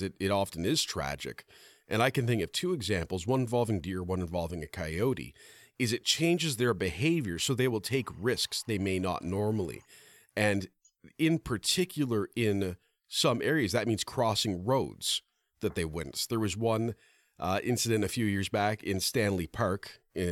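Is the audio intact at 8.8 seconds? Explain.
No, there's timecode bleed there, running from about 7.86 to 9.86 s, just after "behavior so they will". Linear timecode, which fits 24-frame code, leaks in from a neighbouring line, so a faint chirpy warble flipping between roughly 1 and 2 kHz sits well under the speech.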